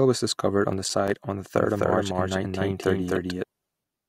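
Just after "was discovered on the", from 0.84 to 1.16 s, there's processor overload crackle: a handful of missed buffers, each a tiny hard-edged silence of about 5 ms, before "on the". Then from 1.56 to 3.44 s, after "on the", there's a doubled audio track: an equally loud, dry copy trails about a third of a second behind, likely from a second, slower capture path.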